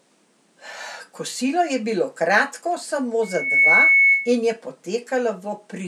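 Speech, and right after "je bilo kratko samo" there's loudspeaker feedback squeal from 3.23 to 4.37 s. A 2.2 kHz tone swells over roughly 0.4 s to sit about 10 dB above the speech. The mic is hearing its own speaker and the loop runs away, clearing just before "in je".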